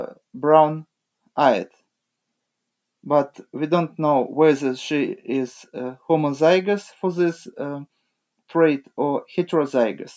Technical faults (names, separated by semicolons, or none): none